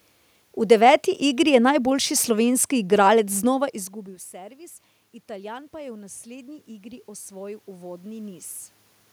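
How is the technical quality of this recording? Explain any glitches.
The recording has one glitch, an automatic gain rise. From 4.32 to 8.55 s, after the talker moved away around 3.5 s and the input dropped by about 22 dB, the gain control slowly added about 9 dB. Voice and room noise swell together, which shows as a rising waveform envelope and a brightening spectrogram floor.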